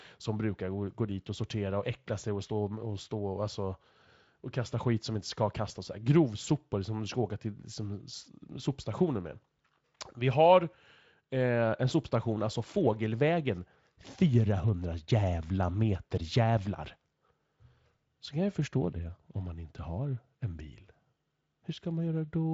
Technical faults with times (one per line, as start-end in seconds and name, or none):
none